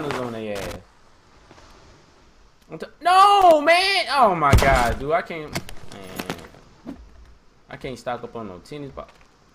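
Loose connector crackle breaks into the audio twice, from 0.56 to 0.76 s and again from 3.41 to 3.52 s, each an irregular burst of scratchy crackle lasting about a fifth and a tenth of a second. It comes from a worn or dirty contact somewhere in the chain that flickers between touching and not touching as it shifts, so the signal is chopped on and off, and any DC sitting on the line turns each break into a pop.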